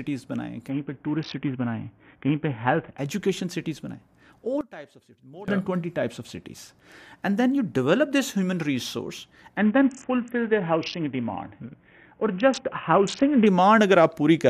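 From 0.70 to 2.98 s, a Bluetooth SBC bit pool drop occurs: the link appears to have cut the encoder's bit budget sharply, consistent with a fall from a bit pool of 31 to about 5, or roughly 50 kbps. Starved of bits, the upper sub-bands lose their content and the rest is quantised coarsely, so the speech turns dull and gritty.

From 4.61 to 5.48 s, the level falls by about 20 dB and the centre of the speech fades to a faint residue. This is likely one channel inverted, with the two channels cancelling each other when summed to mono.

From 9.57 to 13.47 s, the same bit pool drop returns, consistent with the same reduction to about 50 kbps, bringing back the dulled, gritty treble for the whole span.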